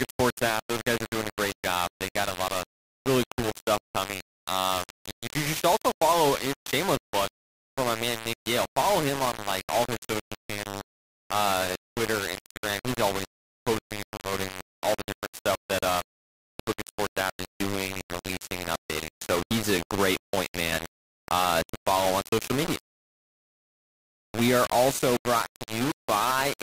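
The speech was likely requantised to 3 bits by plain rounding, without dither, causing low bit depth distortion throughout: grainy, signal-following grit only about 10 dB below the voice.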